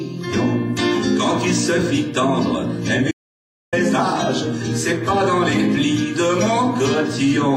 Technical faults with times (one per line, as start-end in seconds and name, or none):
3.11-3.73 audio dropout to silence